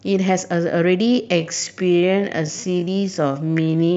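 From 1.0 s to the end, the speech abruptly slows to about 0.58 times its pace while pitch stays put, so it drags. This time-stretched section was likely made by software lengthening the audio by repeating short pieces to fit a longer duration.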